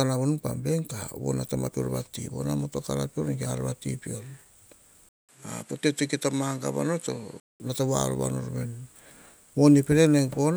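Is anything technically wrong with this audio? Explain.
Yes. From 5.09 s to 7.60 s the speech loses everything above 13 kHz, a short silence of about 200 ms opens at the changeover, and a faint new background noise appears well below the speech while loudness stays roughly the same. This is most likely an input switched to a poorer device, a different microphone with narrower response and its own noise floor. The silent gap and the changed background mark a device swap rather than simple filtering or a codec bandwidth drop.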